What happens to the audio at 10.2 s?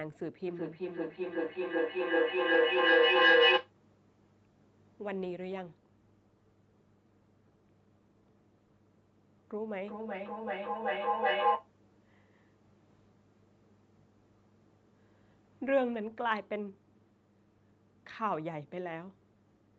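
At 10.2 s the speech is inside a burst of feedback echo between two devices, running from 9.61 to 11.71 s. A second device in the room replays the call and the microphone recaptures it, so the sound returns roughly every 400 ms, thinner and ringing. The repeats build to about 5 dB above the speech instead of dying away.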